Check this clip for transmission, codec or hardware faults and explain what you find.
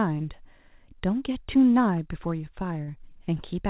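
One transmission fault is audible. At 2.84 to 2.89 s there is short concealed packet loss: about 40 ms of audio failed to arrive in time, and the receiver's concealment extrapolated from the preceding sound for roughly 33 ms before crossfading back to real audio. It is heard as a brief smear or wobble in the speech. Across the clip, the call path cuts everything above 4 kHz, which fits narrowband G.711 telephony coding.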